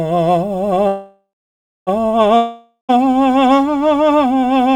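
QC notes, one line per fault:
0.87–1.89 s, call audio freeze: the music stalls for about 1 s. The last sound carries on as a fading buzz that decays into roughly 0.6 s of silence, then the music picks up exactly where it stopped. Nothing is skipped, so everything afterwards lands about 1 s later than it should. That points to packets likely held up in transit, with an empty jitter buffer being padded. The clean resumption with no jump in the music distinguishes it from a dropout.
2.37–2.99 s, long network dropout: a gap of about 0.62 s. The last sound smears into a decaying buzz, followed by roughly 0.1 s of silence. When the music returns it has jumped forward about 0.52 s, so that stretch of the performance is gone rather than delayed. This fits audio likely lost on the network, with the receiver concealing the hole and then rejoining the live stream further on. The forward jump, not a clean resume, is what distinguishes it from a freeze.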